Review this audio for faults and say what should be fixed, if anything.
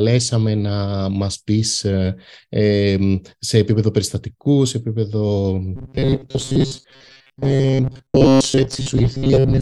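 From 5.76 s to the end at 9.61 s, the speech turns into a rigid, metallic buzz at a fixed 134 Hz that only loosely follows the words. This is robotic sound from repeated short buffers. It is likely caused by audio arriving too seldom, so that most of that stretch is filled by looping a chunk of about 7.5 ms while the real audio is skipped. Unlike plain dropouts or stutter, there is no silence or audible jump; the gaps carry a steady pitched tone. To prevent it, give the audio path enough buffering and scheduling headroom that new data always arrives before the playback buffer runs dry.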